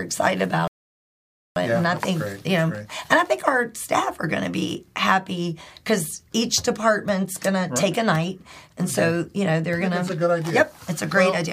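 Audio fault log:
0.68–1.56 s, rebuffering stall: playback ran dry and halted in silence for 0.89 s while awaiting more data, then resumed exactly where it stopped, nothing lost.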